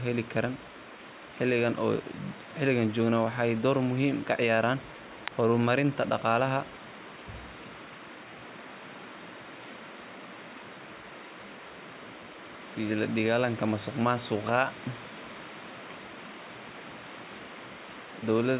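No faults can be heard in the speech, and the band stopping at 4 kHz points to a narrowband call codec such as G.711 mu-law at 64 kbps working as expected.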